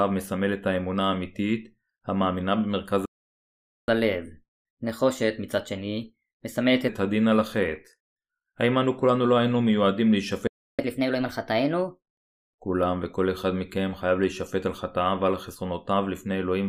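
At 3.05 s the speech just cuts out for about 0.82 s, a playback stall, most likely the player running dry or its thread getting blocked, and it picks up again at 3.88 s. It happens again from 10.47 to 10.79 s, a shorter gap of about 0.31 s.

Right after each gap there's catch-up at higher speed, where the player resamples through its backlog. From 3.88 to 6.88 s it runs at 1.15 times speed, pitch up about two semitones. From 10.79 to 12.04 s it's 1.25 times, up about four.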